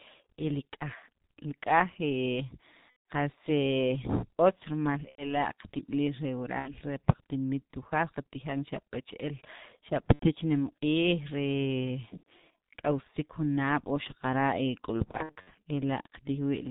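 The whole recording has passed through the G.723.1 codec, heavily damaged, at a rate consistent with about 6.3 kbit/s. The codec discards everything above 4 kHz and rebuilds the speech from a coarse vocal model refreshed only every 30 ms. The result sounds muffled and hoarse, with consonants smeared together because they change faster than the model can follow.

VoIP packet loss concealed by the speech codec interrupts it at 2.91 to 3.02 s, 5.09 to 5.33 s, 6.59 to 6.74 s, 10.13 to 10.27 s, 12.17 to 12.24 s, and 15.11 to 15.50 s. When packets go missing, the decoder fills the gap by continuing the last pitch and vocal filter at steadily falling gain. Each dropout therefore becomes a stretched, buzzy tone or coloured noise that fades away, and the speech stays weak and distorted for a moment after data resumes. The last event is a cluster of short gaps, none longer than about 60 ms, spread over roughly a third of a second.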